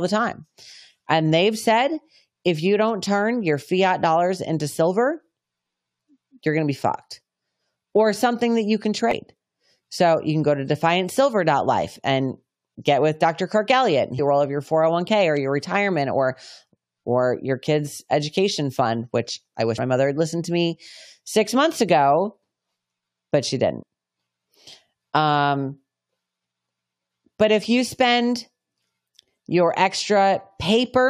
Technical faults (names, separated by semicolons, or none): damaged data in a compressed stream